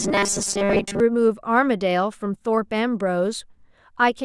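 From 0.01 s to 1.0 s, the speech has robotic sound from repeated short buffers. It becomes a stiff, metallic buzz pitched at 200 Hz. The words remain roughly traceable under it. The likely cause is new audio arriving too slowly. The playback then loops the most recent slice instead of waiting. A 200 Hz buzz fits a slice about 5 ms long. Most of this stretch seems to be repeats, with much of the real audio dropped.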